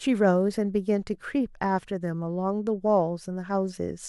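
Nothing stood out on listening to the speech in this recording.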